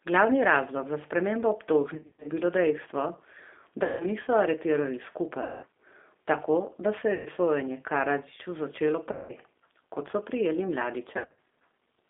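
Speech runs through a narrow, slightly rough and synthetic-sounding line, with the band held to roughly 250 Hz to 3.6 kHz and the coding damage plainly audible. This is the G.729 codec, which fits G.729A at 8 kbit/s: it rebuilds each short frame from a vocal-tract filter, a pitch predictor and a few pulses, discarding fine detail. Six times the speech smears into a buzzy, fading drone and stays weak briefly afterwards: 1.94 to 2.28 s (between "razlog za spremembo" and "bilo dejstvo"), 3.83 to 4.07 s (just before "niso aretirali"), 5.43 to 5.65 s (right after "niso aretirali"), 7.14 to 7.29 s, 9.12 to 9.32 s and 11.17 to 11.37 s. This is VoIP packet loss concealed by the speech codec. The gaps fit 120 to 200 ms of missing audio, broken into short runs in the first and last. The decoder stretches its last pitch and filter while lowering the gain, and recovers slowly because each frame builds on the previous one.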